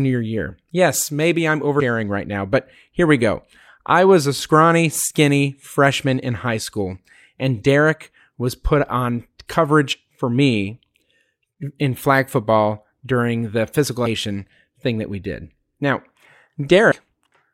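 Damaged data in the compressed stream shows up three times: 1.79–1.81 s after "maybe I'm", 9.92–9.94 s before "for me", and 16.91 s. Corrupted frames make the decoder lose sync and hunt for the next header, each producing a brief glitch in the speech.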